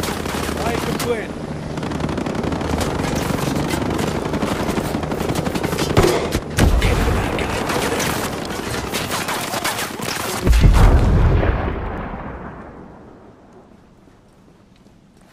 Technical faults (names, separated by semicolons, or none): word clock ticks